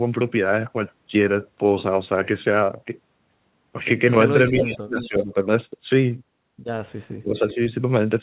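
From 4.47 to 4.78 s an echo leak appears: a delayed copy, about 374 ms behind and only about 5 dB below the speech, likely from a loudspeaker echo the canceller missed. On a spectrogram it shows as repeated harmonic traces offset in time. Speech suppressed in double talk follows from 4.51 to 5.35 s, likely because the canceller ducked both sides, and the waveform dips by up to about 30 dB. Fainter echo returns at 5.0 to 5.24 s (about 15 dB down). At 7.2 to 7.6 s the suppression recurs, dipping about 20 dB, with a weak echo at 7.36 to 7.55 s (about 20 dB down). Throughout, the spectrogram stops at 4 kHz, as expected from the narrowband call path.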